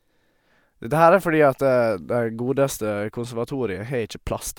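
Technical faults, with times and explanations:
Nothing stood out on listening to this speech recording.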